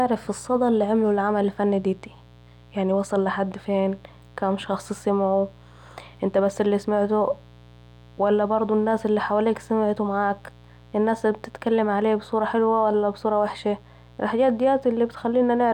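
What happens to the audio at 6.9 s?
Mains buzz, present throughout and so at 6.9 s: switching spikes twice per 60 Hz cycle inject harmonics into kilohertz range, a steady raspy buzz roughly 25 dB below the speech.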